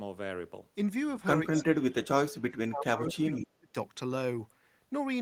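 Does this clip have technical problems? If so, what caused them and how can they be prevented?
Yes. From 1.5 to 3.75 s the speech dips, by as much as roughly 35 dB, for about two seconds in total. That's likely speech suppressed in double talk: the echo canceller couldn't separate this talker from the far side's loudspeaker echo and turned everything down. Better double-talk detection, or taking turns, prevents it.

At 1.55 to 1.64 s there's a brief echo leak, a scrap of the voice coming back about 200 ms late and about 15 dB down. Some of the loudspeaker sound likely got past the far end's echo canceller. Headphones there, or a better-tuned canceller, would stop it.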